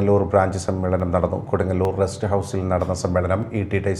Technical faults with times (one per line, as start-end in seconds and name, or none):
1.00 dropped samples
1.85 dropped samples
3.42 dropped samples